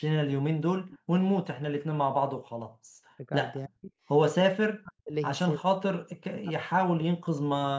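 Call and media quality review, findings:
Echo leak, 0.89–0.99 s: far-end echo canceller likely let loudspeaker pickup through. A faint delayed copy of the speech returns about 313 ms late, roughly 25 dB below the talker. Brief, ghost-like.

Speech suppressed in double talk, likely from echo canceller misjudging simultaneous talk as echo and attenuating both its own talker and the echo. Talker level dips at 3.17–3.32 s (shallow, around 10 dB), then deep cuts near 40 dB at 3.67–3.92 s, 4.44–5.14 s and 5.58–7.72 s. Speech chopped into pieces, suppressed for about two seconds at the end. Band tops out at 8 kHz.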